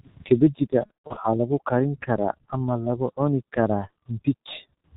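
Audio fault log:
throughout: G.723.1 codec at 6.3 kbit/s. The sound is band-limited with nothing above 4 kHz, so it comes out muffled. The codec's 30 ms frames and slowly updated voice model smear consonants and leave a hoarse, rough texture. The damage is heavy across the clip.
0.86 to 1.19 s: VoIP packet loss concealed by the speech codec. About 210 ms of audio went missing across 300 ms, the longest gap 120 ms. The decoder kept extending its last pitch and filter at falling gain, so the sound stretches into a buzzy tone or coloured noise that fades, and the voice stays weak as "lagu karin karaa ama" begins.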